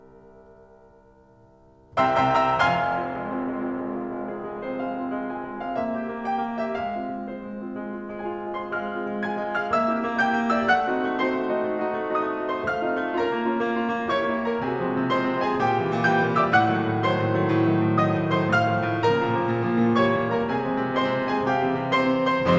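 A music clip with nothing technically wrong with it, carried over a call path whose band stops at 8 kHz, which fits the G.722 codec.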